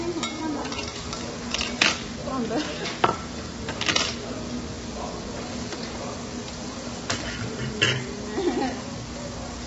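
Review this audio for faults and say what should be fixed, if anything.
Low-delay AAC compression, likely AAC-ELD, runs throughout: coarse quantization at a low bitrate turns detail into rough, grainy noise. A spectrogram shows energy filling gaps and a hard ceiling near 7.8 kHz, which fits about 16 kbps. Prevent it by encoding at a higher bitrate.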